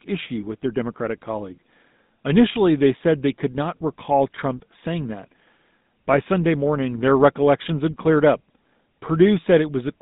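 From start to finish the speech carries the GSM full-rate codec's signature: a buzzy, gravelly grain that's plainly audible. The codec rebuilds the voice from a vocal-tract model fed by a sparse, evenly spaced pulse train, so the fine texture of the excitation is lost, which fits the 13 kbps full-rate mode. The line band runs roughly 150 Hz to 3.7 kHz, with nothing at all above 3.8 kHz, so the audio sounds boxed-in and dull.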